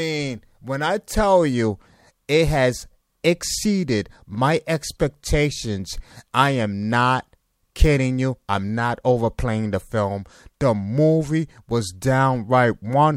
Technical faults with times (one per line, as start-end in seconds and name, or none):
none